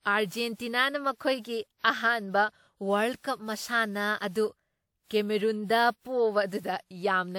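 Throughout, lossy re-encoding, likely about five WMA-style passes, causes generation loss: the speech sounds swirly, hollow and smeared, attacks blur, and nothing exceeds 19.9 kHz.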